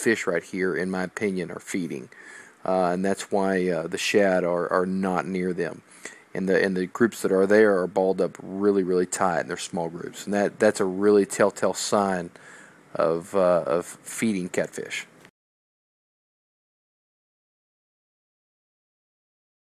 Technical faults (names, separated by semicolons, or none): none